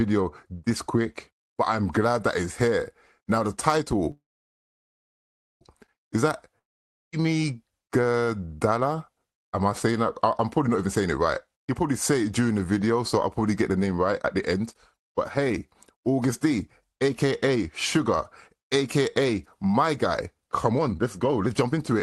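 At 4.11 s the sound stops and a short fading buzz is carried on from the last moment before about 1.4 s of silence. At 5.63 s it picks up exactly where it left off. That is a call audio freeze, likely from packets held up until the jitter buffer ran dry. Nothing is lost, but the audio after it now runs about 1.5 s later.

A second break at 6.59 s sounds much the same, with a brief decaying hiss and then about half a second of silence until 7.14 s. This one is a long network dropout. When the sound returns it does not resume from the cut point. Roughly the same half second of audio is simply gone, so the material jumps forward instead of being pushed later.

From 10.86 s onward the sound repeatedly runs fast at unchanged pitch. This is jitter buffer speed-up, where the receiver trims tiny pitch-period slices to drain a backlog. It happens from 10.86 to 12.32 s and 13.70 to 13.99 s at about 116% speed, then from 14.39 to 15.51 s and 15.95 to 17.70 s at a milder 106 to 107%. 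The strongest stretch is 20.38 to 22.00 s at 130%, where close to half a second is squeezed out and it sounds clearly hurried. Unlike the dropout, this is a steady compression with no gap. Throughout, the upper band stops near 12 kHz, which fits Opus at a modest call bitrate.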